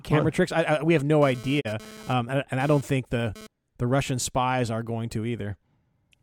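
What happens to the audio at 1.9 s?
At 1.9 s you're right in the middle of a GSM phone buzz that runs from about 0.99 to 3.47 s. A 2G phone nearby is pulsing its transmitter about 217 times a second during a data transfer, and the audio circuitry rectifies those radio bursts. That comes through as a harsh, raspy 217 Hz buzz packed with harmonics, sitting about 19 dB under the speech and dropping in and out rather than holding steady.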